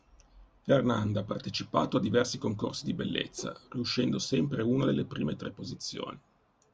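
Speech recording, no audible technical faults anywhere in the clip.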